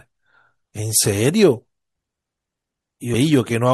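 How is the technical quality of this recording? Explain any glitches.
Quality is poor: plainly audible coding artefacts throughout, plus two audible jumps.

MP3 compression: the speech sounds watery, with swirling high end. This is likely lossy coding at a low bitrate, consistent with about 64 kbps.

Compressed frames skipped: at 0.64 s about 150 ms vanishes, and at 3.13 s about 100 ms. Each is a short smeared blip where the decoder skipped whole frames, consistent with 24 ms frames.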